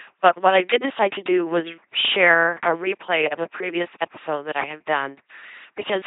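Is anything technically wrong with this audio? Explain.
Yes. Throughout the speech, LPC-10 vocoder coding replaces the voice with a ten-pole filter excited by either a pulse train or noise, yielding a buzzing robotic tone with nothing above 3.8 kHz. Unlike plain band-limiting, each moment flips wholly between buzz and hiss, which fits about 2.4 kbit/s.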